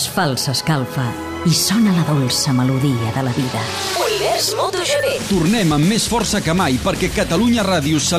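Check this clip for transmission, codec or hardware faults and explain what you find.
Nothing audible in the signal points to a fault: it stays steady and continuous throughout, with no disturbance that could be traced to the transmission path, the encoding or the hardware.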